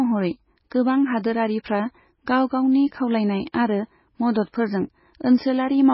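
A recording of speech that sounds watery and swirly throughout, with nothing above 5.6 kHz. This is likely MP3 compression at a very low bitrate, around 16 kbps, starving the treble and dropping weak frequency lines frame by frame. Right after "गाव गावनि खावलायनाय", from 3.52 to 3.54 s, a brief hiss leads into a softened attack. This is pre-echo, where the codec spreads its quantisation noise across the block and into the quiet moment before the onset.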